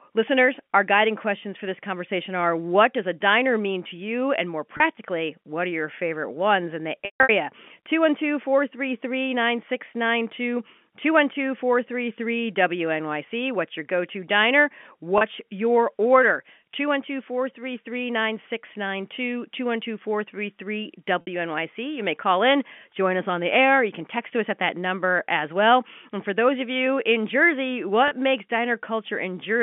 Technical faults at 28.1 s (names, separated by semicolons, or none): packet loss with pitch repetition